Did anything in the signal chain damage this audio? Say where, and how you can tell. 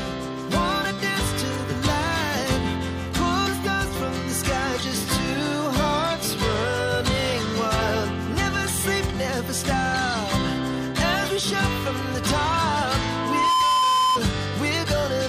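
Yes. The acoustic loop between a loudspeaker and the microphone feeding it went unstable, producing loudspeaker feedback squeal from 13.05 to 14.20 s. At 1 kHz the loop gain crossed unity, so that frequency kept recirculating and growing on its own. It is audible as a pure 1 kHz tone that swells over about half a second and ends up roughly 5 dB louder than the rest of the sound before it stops.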